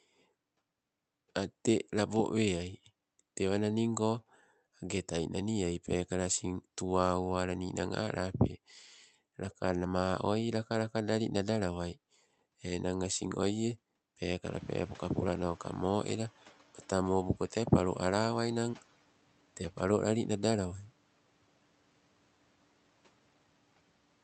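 A speech clip, carried over a call path whose Opus coding keeps the audio within about 8 kHz. Around 14.5 s the room noise jumps by about 17 dB, and from 14.45 to 16.31 s the noise suppressor is catching up. For those 1.86 s the louder noise passes with little reduction, then sinks by about 7 dB as the suppressor's estimate adapts. What marks this as suppressor lag rather than pumping or gating is that the fade is a single steady slide after the step, unrelated to when speech starts or stops.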